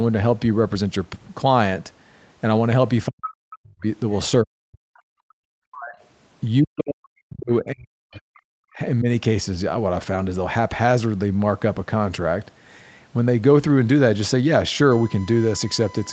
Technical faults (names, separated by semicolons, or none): speech suppressed in double talk; background gated by the echo canceller; other side's voice leaking through